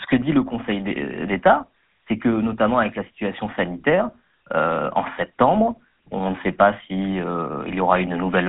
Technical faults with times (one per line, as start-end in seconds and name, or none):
0.00-8.49 GSM full-rate codec